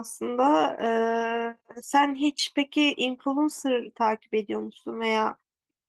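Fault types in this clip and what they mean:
Nothing stood out on listening to this speech clip.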